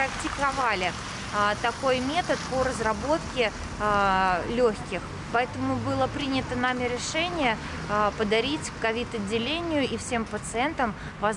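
Nothing in the audio stands out as a technical fault, so there's nothing to pin to any point in the timeline.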